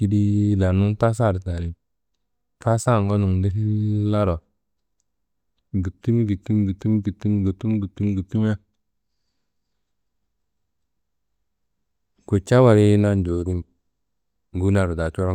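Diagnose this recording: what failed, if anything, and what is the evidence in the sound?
Sample clock jitter at the converter, 3.77 to 6.98 s: its unsteady clock adds hiss, roughly 50 dB down, that swells on loud, bright speech.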